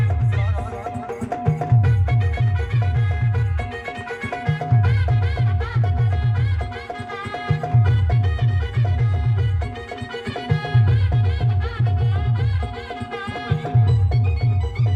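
No technical faults can be heard anywhere in it.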